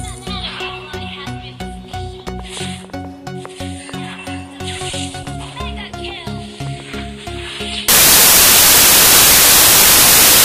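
Samples built from the wrong bytes take over from 7.88 s and last to the end at 10.45 s. From that point the reader assembles each sample with its bytes misaligned or in the wrong order, so the rapidly fluctuating low-order bits end up driving the most significant part of every value. The audio collapses into loud, harsh broadband noise, close to white on the louder passages.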